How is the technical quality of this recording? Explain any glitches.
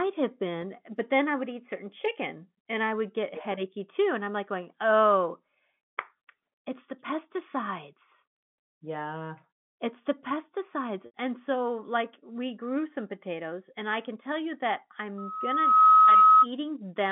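Two glitches stand out in this telephone speech, which comes through a G.711 line with the usual narrow 150 Hz to 3.5 kHz band.

At 11.06 to 11.13 s, just after "the pesticides", there is packet loss with pitch repetition. About 80 ms of audio went missing, which fits four lost 20 ms packets. The receiver filled the gap by repeating the last pitch period and fading it out. The result is a brief held, buzzy sound that drops away before the speech returns.

From 15.18 to 16.47 s, right after "can tell you that", a loudspeaker feedback squeal appears. The microphone picked up its own loudspeaker, and the loop gain passed one at 1.3 kHz. That tone swells over roughly 0.7 s into a squeal about 15 dB above the speech.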